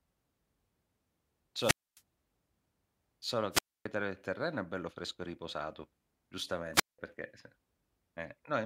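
An analogue FM microphone's radio signal fades until the receiver's squelch mutes the output, causing three wireless microphone squelch dropouts in the speech. They occur at 1.59–2.02 s, 3.51–3.87 s and 6.73–6.99 s. Each brings a brief surge of hiss and then a near-silent hole of 261 ms, 270 ms and 189 ms respectively before the voice returns.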